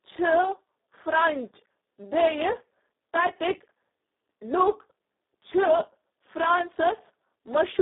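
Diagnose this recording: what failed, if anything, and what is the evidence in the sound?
Throughout, the speech sounds hoarse, buzzy and close to robotic, confined to a narrow telephone band of about 250 Hz to 3.7 kHz with nothing above 3.8 kHz. The failure is at the codec stage: Speex codec damage at a very low setting, which fits a rate of around 4 kbps. Too few bits remain to code the excitation, so it is reduced to a rough, vocoder-like buzz.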